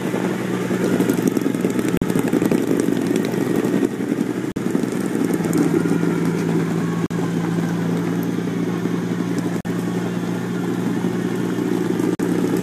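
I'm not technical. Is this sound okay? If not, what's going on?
No. There is a gap between chunks: the audio was likely delivered in pieces about 2.5 seconds long, with a brief silence of about 44 milliseconds left at each join. You hear short, sharp-edged holes at 1.97, 4.52, 7.06, 9.61 and 12.15 seconds. Unlike a dropout, where some sound goes missing, nothing is lost here. The sound simply pauses and resumes, and the holes come at a steady, regular rhythm.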